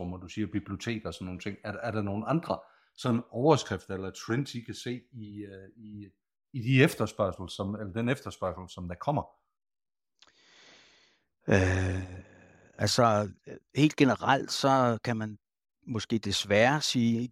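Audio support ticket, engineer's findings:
Speech clip reviewed; no audible faults found.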